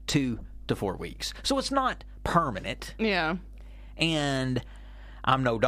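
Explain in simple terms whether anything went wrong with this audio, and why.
Mains hum runs through the whole clip: a steady low buzz at 50 Hz sitting fairly loudly under the speech. It happens when the electrical power line leaks into the recording, typically through a ground loop or a nearby transformer, adding that constant drone.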